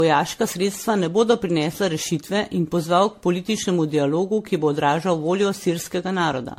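All the way through, the speech has that swirly, hollow, smeared sound of generation loss, with blurred attacks and nothing above 16.4 kHz, likely from repeated MP3 re-encoding around 65 kbit/s, a dozen-plus passes.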